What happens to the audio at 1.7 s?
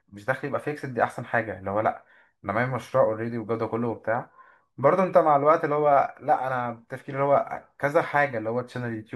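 Nothing goes wrong at 1.7 s: the speech there plays through intact, with no dropout, click or distortion.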